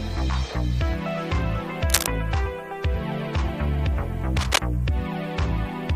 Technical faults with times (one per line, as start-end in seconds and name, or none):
1.88-2.07 cable scratch noise
4.37-4.58 cable scratch noise